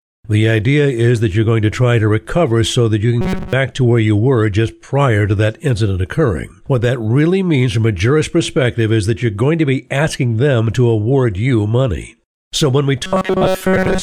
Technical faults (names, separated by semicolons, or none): robotic sound from repeated short buffers